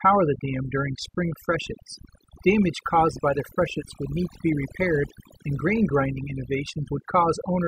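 Overdone noise removal runs through the whole of this speech clip: a noise reduction stage set too strong pulls individual frequency bands down whenever they sit near its noise estimate, leaving near-silent gaps with twinkling specks.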